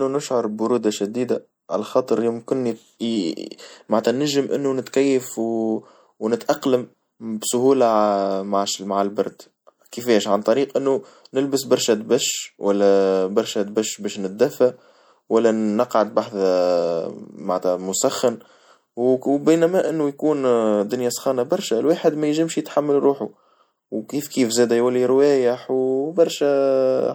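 From start to finish the speech carries plainly audible MP3 compression damage, most likely from encoding at a low bitrate; the degree of loss fits about 64 kbps. With too few bits, the encoder discards the upper treble above a fixed cut-off and drops quieter frequency lines, which flicker in and out between frames. The result is a dull top end, a watery, swirling texture behind the speech, metallic chirps on s sounds, and softened consonant attacks.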